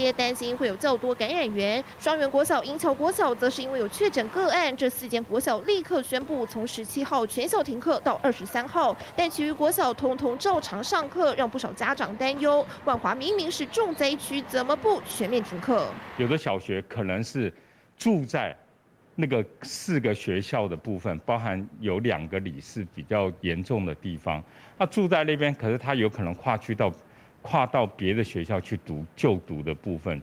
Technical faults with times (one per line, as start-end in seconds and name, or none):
none